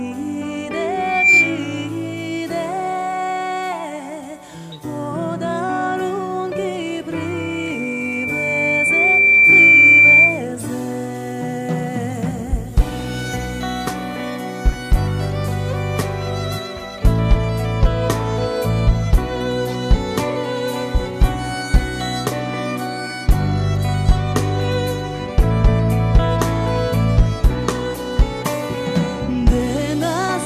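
Loudspeaker feedback squeal hits twice, both at 2.4 kHz. From 0.98 to 1.6 s it swells up almost instantly, and from 7.13 to 10.45 s it creeps in over a couple of seconds. Each time the mic is hearing its own speaker and the loop runs away at that pitch, ending up roughly 10 dB above the sound.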